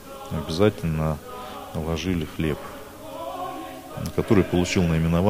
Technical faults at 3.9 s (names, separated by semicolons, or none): none